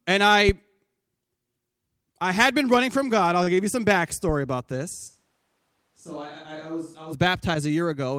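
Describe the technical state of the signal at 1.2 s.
At 1.2 s the speech signal is intact, with no audible technical fault at that point.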